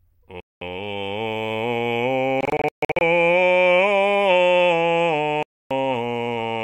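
Bluetooth dropouts, likely from packets missing their deadline on the wireless link, cut the music at 0.40 to 0.62 s (about 210 ms of silence), at 2.41 to 3.01 s, and at 5.43 to 5.71 s (about 280 ms). The middle one is broken up: about 370 ms of gaps scattered across 0.6 s, the longest near 140 ms. Each hole has abrupt edges or a fade of a few milliseconds, and the music comes back further along, as though it had kept playing through the gap.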